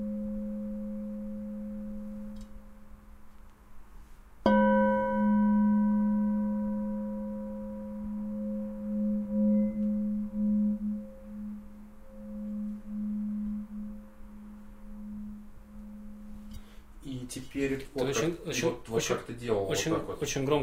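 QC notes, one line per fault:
No faults found across the clip; nothing to log.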